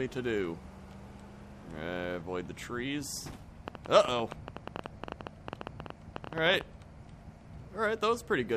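From 3.68 to 6.62 s, likely interference or a faulty connection injects a train of clicks: about 40 irregular pops at 11.9 per second, ticking over the sound.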